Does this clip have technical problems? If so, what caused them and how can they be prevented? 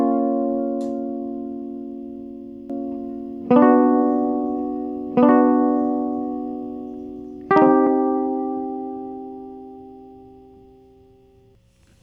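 Yes. From 2.70 s to 7.68 s the music has a doubled audio track: a second, full-band copy of the same material plays about one and a half seconds behind the original, at roughly the same level. The copy carries no reverb tail or room colour, and it cuts in and out abruptly at those two points. The likely cause is the signal being captured twice, once through a slower path. Route the source through a single capture path to prevent this.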